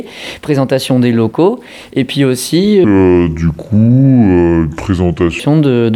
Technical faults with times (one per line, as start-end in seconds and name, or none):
2.84-5.40 section at the wrong speed